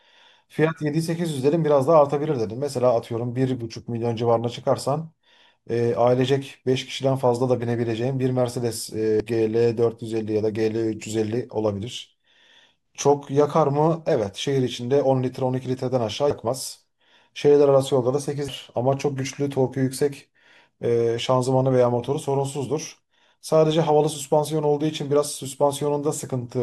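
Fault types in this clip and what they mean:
Damaged data in a compressed stream: corrupted bytes in the encoded speech made the decoder misread those frames, lose sync and hunt for the next valid frame header. Each time this leaves a very short blip cutting through the speech, at 9.20, 16.30 and 18.48 seconds.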